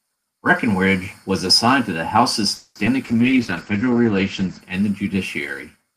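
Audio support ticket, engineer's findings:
Call audio freeze, 2.55–2.77 s: last sound stretched into a fading buzz, about 50 ms of silence, then resumes where it stopped. Likely late packets draining the jitter buffer. A 200 ms gap is inserted and nothing is lost, unlike a skip.

Skip ahead, 2.85–2.88 s: playback jumps forward with roughly 70 ms of audio gone, almost seamlessly joined by a 10 ms fill. Queued audio was dropped, shedding about 50 ms of built-up delay. No pause, unlike the freeze just before it.

Call bitrate drop, 3.03–4.69 s, ending before "and the": sound turns rough and muffled. The Opus encoder was cut from 40 to 12 kbps and the top end from 20 kHz to 8 kHz, bottoming out for 1.54 s. The quality loss is continuous, with no timing break.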